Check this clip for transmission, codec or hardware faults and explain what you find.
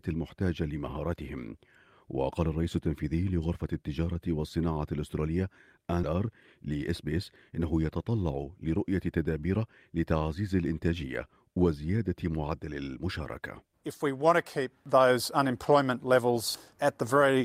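Two transmission faults are audible, both around the six-second mark.

At 6.03 s there is a skip ahead. About 0.7 s of speech is dropped, either lost in transit or discarded when the jitter buffer overflowed. Playback joins the two sides directly with no filled gap, so the speech jumps abruptly forward.

From 6.13 s to 7.60 s there is a jitter buffer speed-up. With the buffer holding more audio than its target, the receiver repeatedly cut pitch-period-sized pieces, around a tenth of a second in total. The speech runs at 107% speed at unchanged pitch and sounds hurried.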